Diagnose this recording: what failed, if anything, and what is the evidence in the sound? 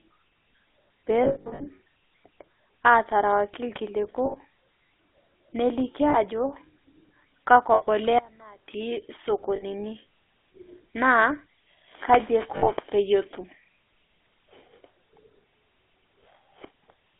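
The codec stage is the main culprit here: the whole speech track has the buzzy, gravelly roughness of GSM full-rate coding at 13 kbps, band-limited to a 300 Hz–3.5 kHz line. The pulse-driven excitation model throws away fine detail, and it's plainly audible throughout.

On the network side there are lost GSM frames, where the decoder repeats the last good frame at falling level, giving a short metallic ring. The worst cluster is scattered across 1.24–1.70 s, with runs up to roughly 70 ms. Shorter hits come at 4.26, 6.10, 7.74, 9.56 and 12.56 s, each around 40–80 ms.

There's also an audio dropout to a faint residue from 8.19 to 8.68 s, about half a second where the speech cuts abruptly to a faint sound about 25 dB down, then snaps back. It's likely a break upstream, with the path after it still live.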